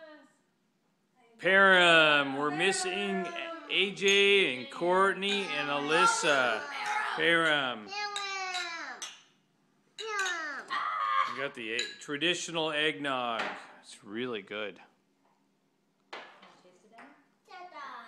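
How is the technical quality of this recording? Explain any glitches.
No glitches turn up anywhere in this recording. The audio runs without interruption, so there is nothing to explain.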